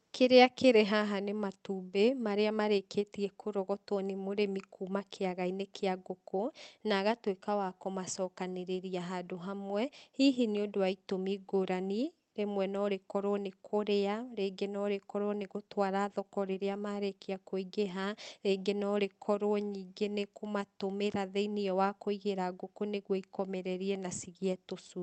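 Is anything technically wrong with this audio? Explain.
No, nothing here is faulty; the speech has passed through a call codec that caps the top end at about 8 kHz and leaves its normal coding texture, which is expected behaviour for that path.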